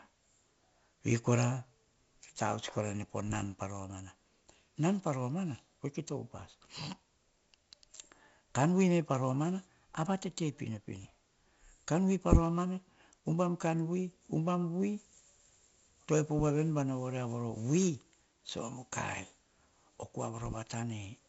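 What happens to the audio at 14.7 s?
At 14.7 s the speech carries a gritty hiss that tracks its loudness, with heavy codec damage and nothing above 7.7 kHz. This is 4-bit ADPCM compression, present throughout the clip, and its sound fits a 64 kbps rate. Each sample is stored as a coarse 4-bit step from a prediction, so the error rides along as broadband noise.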